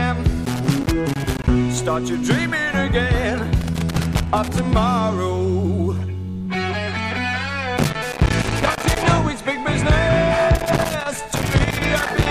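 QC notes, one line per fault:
0.45–1.48 s, 3.61–4.66 s, 7.77–9.03 s, 10.55–12.28 s: loose connector crackle. Four irregular bursts of crackle and scratching. A worn or dirty contact keeps making and breaking as it moves. Each break chops the signal, so the sound stutters into crackle.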